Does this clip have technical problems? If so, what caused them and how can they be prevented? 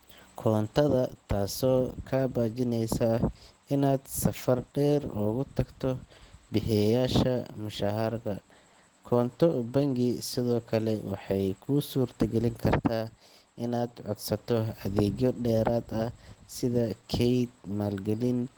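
Yes, the speech sounds muffled, hoarse and grainy throughout, likely from Opus compression in hybrid mode at a rate near 16 kbps; a spectrogram shows smeared, noisy bands up to about 20.1 kHz. Encode at a higher bitrate to prevent it.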